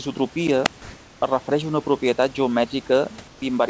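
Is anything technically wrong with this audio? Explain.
Yes, there are two kinds of fault in this speech recording.

A wireless microphone squelch dropout occurs from 0.64 to 0.69 s. The radio signal fades far enough that the receiver's squelch closes and mutes the output for about 27 ms. You hear a brief lift of hiss, a near-silent gap, and then the audio returning.

Comfort noise in place of the background appears from 0.82 to 1.22 s, ending just before "refereix a una propietat", and again from 3.28 to 3.42 s. The likely cause is discontinuous transmission: during these pauses the sender stops transmitting, and the receiver substitutes synthetic noise shaped roughly like the room background. The real room noise, about 28 dB below loud speech, becomes a smoother noise of a different tone. In the first pause it is about 2 dB louder than the real background, and in the second about 5 dB quieter. 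Throughout the clip the band stops near 8 kHz, which fits a G.722 call codec.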